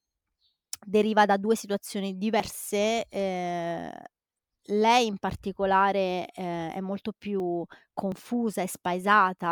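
A likely dropped buffer (overrun) at 7.4 s makes the speech jump abruptly, losing about a tenth of a second, and a second one at 8.12 s skips a shorter stretch of a few tens of milliseconds. Each time, the capture side failed to collect its samples before the hardware wrote over them, so the missing piece vanishes and the audio on either side is butted together with no gap of silence.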